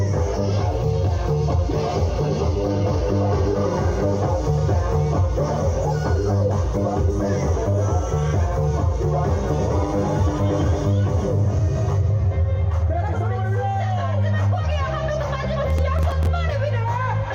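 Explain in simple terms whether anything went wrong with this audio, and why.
Near the end, from about 15.70 to 16.27 seconds, the sound picks up a brief gritty crackle, like static tearing across it, and then clears up. This is processor overload crackle. The computer handling the audio got too busy to prepare each tiny chunk of sound in time. Around ten of these chunks, each only a millisecond or two long, came out as silence. Those tiny sharp-edged gaps, packed closely together, blur into the crackling you hear.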